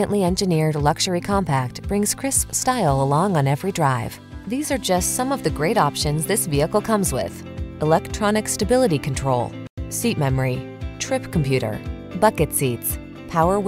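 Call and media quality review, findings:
No faults heard anywhere in the clip. Closing ticket.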